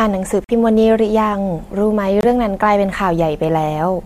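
At 0.44 s the speech drops abruptly into dead silence for about 60 ms, and at 2.21 s a second hole of about 40 ms cuts in just as sharply, each length fitting a pair of codec frames. Both are corrupt frame muted faults: damaged bits made the decoder reject those compressed frames, and the player substituted silence for them, so the audio simply vanishes while the timing around each gap stays intact.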